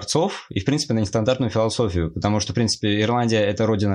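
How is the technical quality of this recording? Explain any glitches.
No audible glitches or faults.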